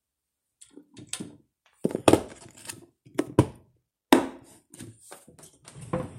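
No technical faults can be heard anywhere in the sound.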